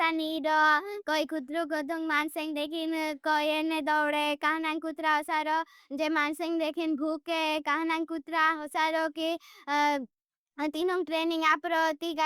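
Nothing in the speech stood out as a technical fault on listening.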